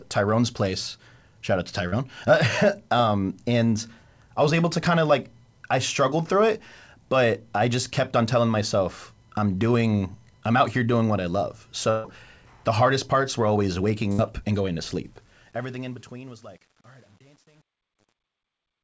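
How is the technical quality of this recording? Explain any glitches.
The recording has three kinds of fault: a short concealed packet loss, two bursts of packet loss, and truncation distortion on the closing fade. All of it sits on a band-limited call path with nothing above 8 kHz, which fits a wideband codec such as G.722.

Short concealed packet loss at 1.88 to 1.94 s, just after "out to": about 40 ms of audio never arrived in time. The receiver extended the preceding sound to cover the hole and blended back in, leaving a brief smear or wobble.

Bursts of packet loss at 11.90 to 12.06 s, between "doing what I love" and "the hardest parts were", and at 14.12 to 14.20 s, between "parts were always waking" and "and going to": about 140 ms and 60 ms went missing. Concealment held the last sound as a fading buzz or hiss, then resumed with that stretch gone.

Truncation distortion on a fade from 15.05 s to the end, worst from 15.73 s. 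As the level drops, a low-resolution gain stage with no dither reduces the waveform to coarse steps, which fits about 9 bits. The tail turns gritty.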